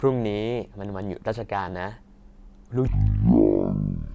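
Speech that, from 2.87 s to the end, drops into a wrong sample rate fault: it plays at about 0.36 times speed and about 17.6 semitones lower, fitting 44.1 kHz audio played at 16 kHz. Unlike a pitch shift or time-stretch, speed and pitch fall together.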